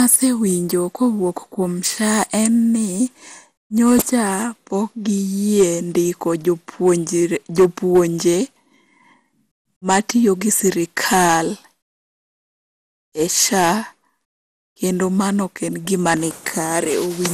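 Generation loss runs throughout. The speech sounds swirly, smeared and hollow, with blurred attacks and nothing above 16 kHz, likely from about fifteen passes through an MP2-like codec near 96 kbit/s.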